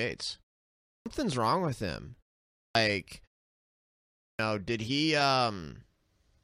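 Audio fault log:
0.9 to 4.39 s, clipped start after a pause: the output wakes late after each silence, cutting off 0.15 to 0.16 s of speech at 0.9, 2.6 and 4.23 s.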